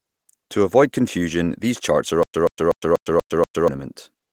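At 2.23 s, after "confusion these charts are", the speech turns into a stutter with silent gaps until 3.68 s. A 132 ms fragment repeats six times, each followed by 110 ms of silence. A stalled stream likely replayed its last fragment. The missing speech is lost.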